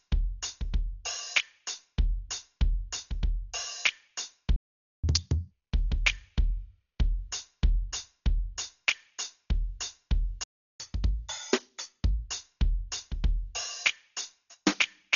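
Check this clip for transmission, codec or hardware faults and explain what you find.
Three kinds of fault are audible in this music: heavy codec damage throughout, two playback stalls, and a sped-up catch-up after each stall.

Throughout the clip, the damage points to Dolby Digital compression at a very low bitrate, which fits something around 40 kbps. The encoder has narrowed the band so that nothing remains above 7 kHz, and it has starved many frequency lines of bits, leaving them to dither noise. The music sounds dull, with a rough, fluttering haze around sustained tones.

At 4.56 s and again at 10.44 s, the player likely ran out of data or was blocked. This is a playback stall, and the output drops to silence mid-flow. The first gap lasts about 474 ms, ending at 5.04 s. The second lasts about 360 ms, ending at 10.8 s. Each time, the music resumes where it stopped.

Each stall is followed by catch-up at higher speed, as the player resamples its backlog to regain lost time. 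From 5.04 to 5.51 s the music runs at double speed, with pitch raised by roughly ten semitones. From 10.8 to 12.25 s it runs 1.25 times faster and about four semitones sharp. Both then return to normal.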